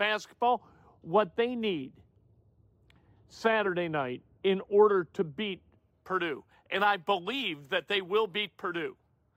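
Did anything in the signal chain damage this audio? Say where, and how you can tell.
Yes. Speech sounds dull and muffled from 0.42 to 5.79 s, smoothly losing about 11 dB by 10 kHz: de-emphasis applied wrongly at playback, cutting treble that was never boosted or cutting it a second time.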